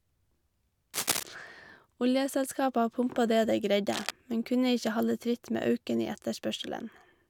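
Cable scratch noise, likely from a worn connector being moved, rasps at 0.94–1.23 s and 3.92–4.11 s after "det dei", appearing as ragged broadband smears.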